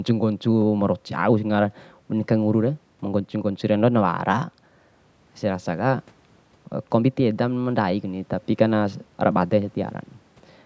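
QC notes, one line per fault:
No faults to list for this speech clip.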